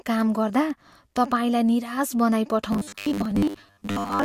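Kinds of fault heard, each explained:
Robotic sound from repeated short buffers: From 2.72 s to the end at 4.24 s the speech becomes a rigid, metallic buzz pitched at 100 Hz that loosely tracks the syllables. The likely cause is audio arriving too seldom, so a 10 ms chunk is replayed in place of most of the missing sound. A waveform would show identical 10 ms segments repeating, and a spectrogram would show evenly spaced horizontal harmonics every 100 Hz.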